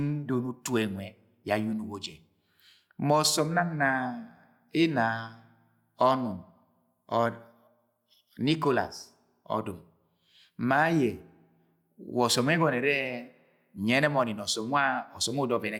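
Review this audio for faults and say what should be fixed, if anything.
Nothing needs fixing; no faults can be heard.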